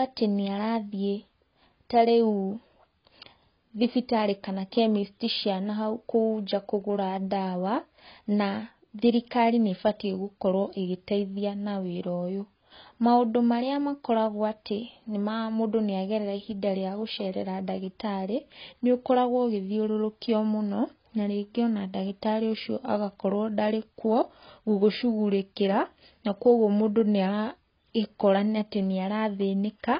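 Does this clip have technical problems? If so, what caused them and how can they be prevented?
Yes. Throughout, the speech is dull with nothing above 5 kHz and carries a watery, warbling smear, likely heavy AAC compression at a very low bitrate, around 16 kbps. A plain low-pass filter would sound dull without that warble. Encode at a higher bitrate.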